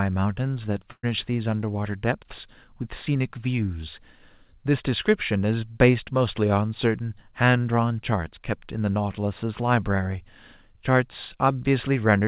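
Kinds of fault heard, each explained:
Burst of packet loss: around 0.92 to 1.05 s, about 120 ms of speech never arrives. The receiver stretches the preceding sound across roughly 110 ms while fading it, then leaves about 50 ms of silence before the speech resumes, skipping the missing part.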